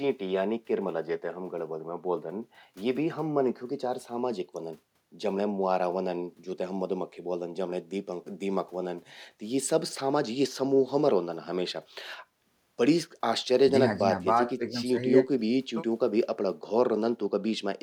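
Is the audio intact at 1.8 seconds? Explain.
Yes, at 1.8 seconds the speech plays through intact with no audible fault.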